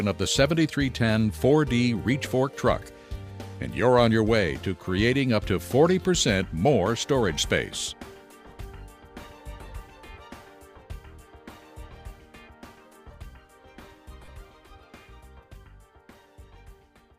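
Lost LE Audio frames at 14.25 to 14.28 s: about 30 ms of the Bluetooth stream went missing, which fits four LC3 frames. The decoder filled the gap by repeating the last spectrum with randomised signs, so the sound briefly turns into a noisy smear.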